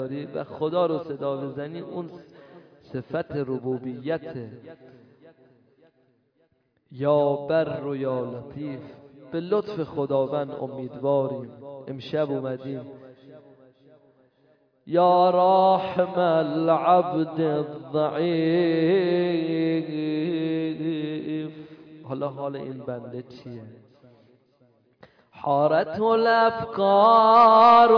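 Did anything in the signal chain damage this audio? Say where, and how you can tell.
No, nothing in the signal chain damaged this audio.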